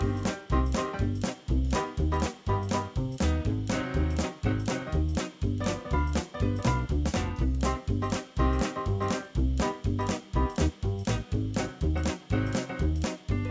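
No technical faults can be heard anywhere in the clip. There is nothing to report at any point in the audio.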